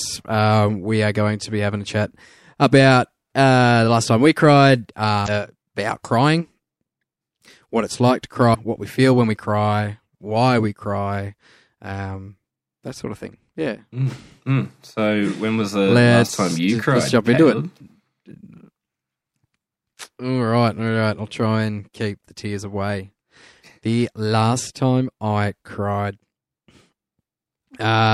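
At 5.24 to 5.28 s, after "last time we cried", a short glitch breaks in before "about crying". At 8.51 to 8.55 s, after "what it's like to", another blip occurs. Both are damaged data in a compressed stream. The decoder misread corrupted frames and lost sync.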